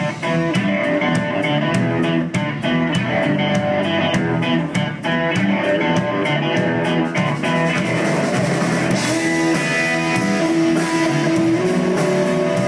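No technical faults can be heard anywhere in the audio; the signal holds steady throughout, with no interruptions, distortion or level problems.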